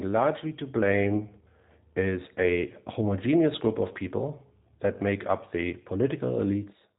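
G.729 codec damage runs through the whole clip, from start to finish. The speech has been rebuilt from a coarse model, a vocal tract filter and pitch predictor driven by a few pulses per short frame, rather than carried as a waveform, which fits the G.729A variant at 8 kbit/s. Nothing reaches above 3.8 kHz, so the top end is missing, and the voice comes through intelligible but plainly rough, buzzy and synthetic.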